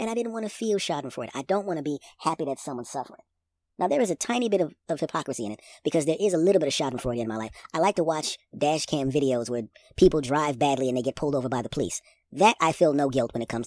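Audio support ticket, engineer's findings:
Wrong sample rate, throughout. Speech runs fast and high, about 1.38x speed and roughly 5.5 semitones up. This fits 16 kHz audio played at 22 kHz with no resampling, so playback clock or rate config is the probable culprit. Spectrogram shows formants and harmonics stretched upward and syllables compressed in time. Waveform events arrive closer together.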